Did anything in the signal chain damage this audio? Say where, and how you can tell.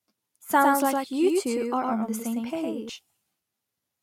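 Yes. From 0.59 s to 2.89 s there's a doubled audio track: the speech is joined by a second full-band copy trailing by around a tenth of a second and sitting about 5 dB under the original. It has no decay tail or room colour, and it cuts in and out abruptly at both ends. That points to the driver or routing stage, likely a second, slower capture path getting mixed back in alongside the direct one.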